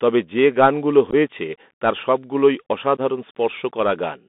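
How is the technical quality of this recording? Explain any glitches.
Quality is rough. The speech came over a Bluetooth headset link, and there are two brief dropouts.

The Bluetooth CVSD headset codec is on throughout. CVSD sends one up-or-down bit per sample with an adaptive step, so the line only carries about 200 Hz to 3.6 kHz. Loud, bright moments outrun the step and distort, s sounds turn scratchy, and a grainy hiss sits underneath.

Unconcealed Bluetooth headset packet loss happens twice, and nothing covers the gaps. At 1.10–1.14 s, right after "তবে যে গান গুলো", several packets vanish, about 22 ms in total scattered over 30 ms, with the longest hole 15 ms. At 2.97–2.99 s, after "তার সব গুলোই", a few more go, about 11 ms. You hear hard-edged holes, and the speech returns quieter for a moment.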